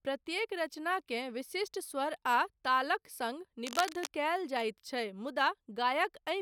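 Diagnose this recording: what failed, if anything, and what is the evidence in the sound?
A burst of dense, ragged scratching and rustling sits over the speech from 3.67 to 4.07 s, roughly 10 dB below the speech itself. It points to the analogue wiring stage and is heard as cable scratch noise: the likely cause is a worn cable, connector or control being handled, so its contact resistance jumps erratically and injects uneven noise bursts for those four-tenths of a second.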